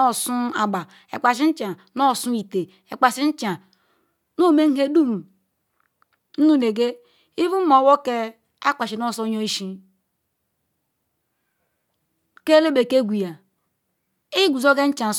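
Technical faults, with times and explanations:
No technical faults are present.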